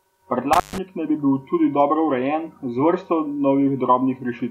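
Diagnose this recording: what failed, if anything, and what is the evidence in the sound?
The failure sits in the analogue wiring: an intermittent contact, a loose cable or plug whose connection opens briefly and then remakes. Between 0.53 and 0.78 s the speech drops out, with the line fully open for about 134 ms. Crackle marks the edges where the contact breaks and closes again, and only faint hiss remains in the gap. On a waveform this is a near-flat stretch bounded by sharp spikes. A spectrogram shows a dark vertical band framed by broadband clicks.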